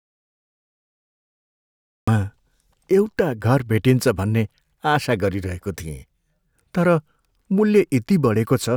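From the very start until 2.08 s the clip holds an audio dropout to silence: the speech enters abruptly mid-flow, as if the input had been lost and then restored, likely through a dropped connection or an accidental mute while the recorder kept writing silence. What sets it apart from a quiet pause or a noise gate is the silence with no room tone or hiss at all, followed by speech appearing suddenly rather than fading in.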